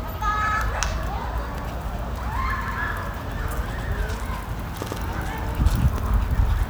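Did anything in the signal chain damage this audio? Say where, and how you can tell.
Yes, overlapping chunks at the buffering stage. A 100 ms piece of sound repeats at 0.48, 1.58, 2.68, 3.78, 4.88 and 5.98 s, heard as a regular stutter. Each 1-second chunk starts 100 ms before the previous one ended, so that stretch plays twice at every join.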